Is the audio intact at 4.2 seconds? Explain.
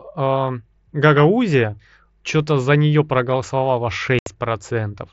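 No. Unconcealed Bluetooth headset packet loss opens a gap from 4.19 to 4.27 s. About 75 ms of consecutive voice packets never arrived and were replaced by silence or an idle pattern. The waveform breaks off with sharp edges, and the spectrogram shows a vertical break across the whole band.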